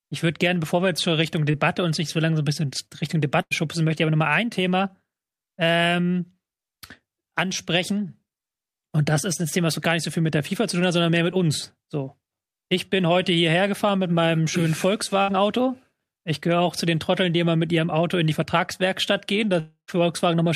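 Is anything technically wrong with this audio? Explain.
Yes. The speech has two short bursts of packet loss and, near the end, one longer gap.

The burst of packet loss occurs at 3.41 to 3.53 s, with about 100 ms missing, and again at 15.22 to 15.30 s, with about 60 ms missing. In each, the receiver stretches the last sound into a brief buzz or hiss that dips in level and then jumps ahead. The fill never reaches silence, which sets these apart from a dropout.

The gap at 19.60 to 19.90 s is most likely a long network dropout, with about 280 ms lost. The held sound fades away and leaves roughly 0.1 s of silence before speech resumes further on. That silent stretch after the fade, and the gap's greater length, separate it from the shorter bursts.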